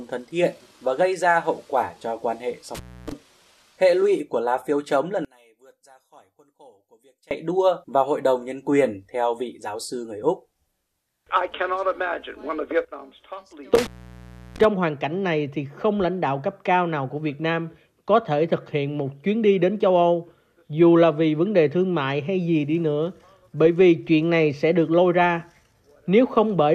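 At 2.75 to 3.12 s an intermittent contact opens the line for about 280 ms: the sound drops out with crackle at each edge, leaving faint hiss. Between 5.25 and 7.31 s the level falls by about 30 dB to a faint residue, likely one channel inverted, cancelling shared content when summed to mono. A second intermittent contact at 13.75 to 14.65 s cuts out for about 690 ms.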